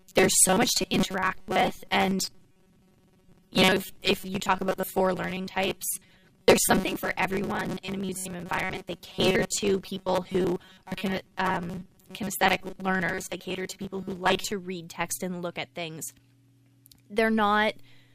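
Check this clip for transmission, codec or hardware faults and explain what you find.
One fault is present: robotic sound from repeated short buffers, from 0.01 to 14.52 s, ending just before "read text and look". It is likely caused by about half the audio being replaced with repeats of a roughly 5 ms buffer. This forces a metallic 188 Hz buzz, which shows as evenly spaced harmonic stripes on a spectrogram and identical repeating cycles in the waveform.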